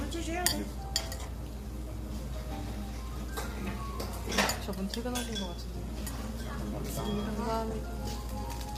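A recording of everyday sounds carries plainly audible low-delay AAC compression for its full length, likely from AAC-ELD at a low rate, consistent with about 32 kbps. Short codec frames smear fine tonal detail into grainy roughness, and a spectrogram shows noise filling gaps between components and a thin, patchy upper band.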